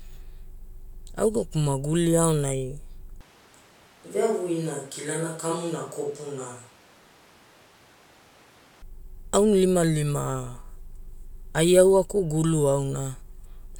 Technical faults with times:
3.21-8.82 switch to a distant microphone

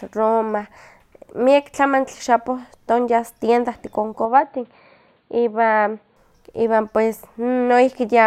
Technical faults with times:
4.25-6.16 input switched to a poorer device

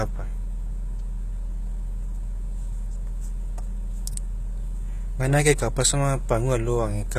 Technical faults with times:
0.00-7.19 HE-AAC compression

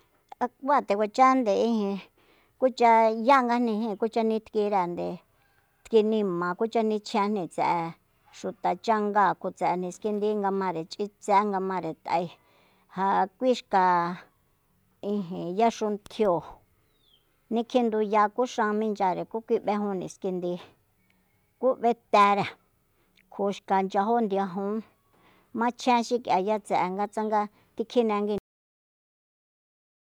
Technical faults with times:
28.38-30.05 cut-off end

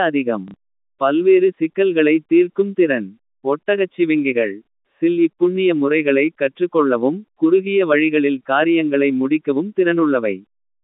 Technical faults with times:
0.48-0.54 packet loss with last packet repeated
4.65-4.68 packet loss with last packet repeated

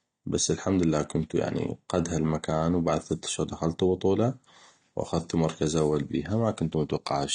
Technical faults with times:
0.00-7.35 AAC compression

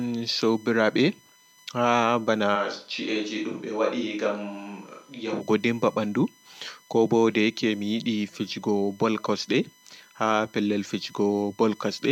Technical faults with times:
0.00-12.11 USB whine
2.57-5.39 switch to a distant microphone

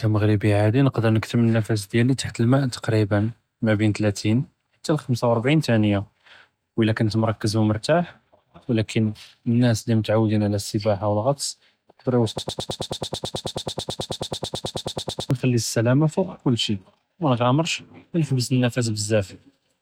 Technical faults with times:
12.38-15.31 broken-record loop

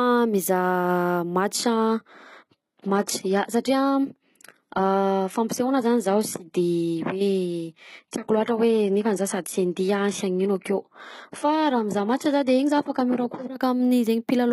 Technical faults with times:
1.54-13.54 adaptive stream at a lower bitrate

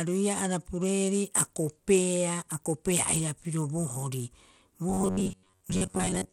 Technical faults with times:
0.00-6.32 Bluetooth SBC compression
4.90-6.32 robotic sound from repeated short buffers

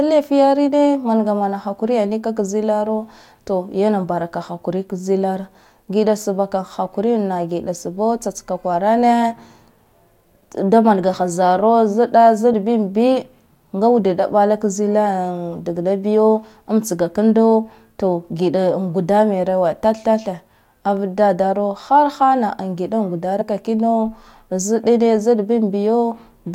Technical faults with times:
12.52 compressed frames skipped
23.40 compressed frames skipped

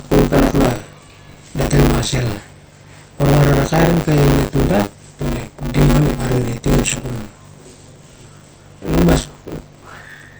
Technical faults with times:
0.00-10.40 MP3 compression
0.00-10.40 buffer tearing

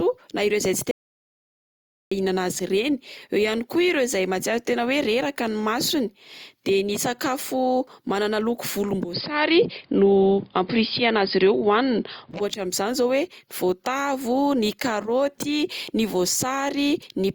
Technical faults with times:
0.91-2.11 audio dropout to silence
9.13-12.31 input switched to a poorer device

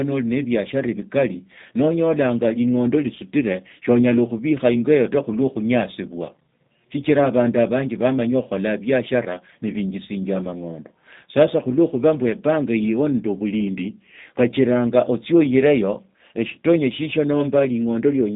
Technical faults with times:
0.00-18.36 G.729 codec

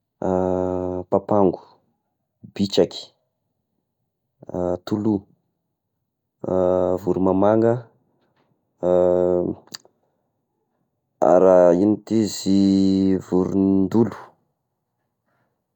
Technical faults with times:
14.11-15.76 crude rate conversion

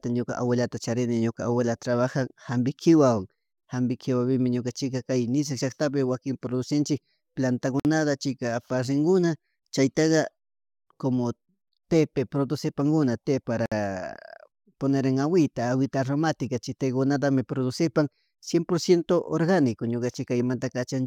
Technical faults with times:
7.80-7.85 gap at a join of encoded pieces
13.66-13.72 gap at a join of encoded pieces

